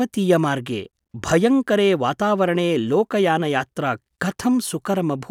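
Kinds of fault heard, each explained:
No kinds of fault can be heard in this speech clip. Nothing in the sound gives cause for a fault line to be listed.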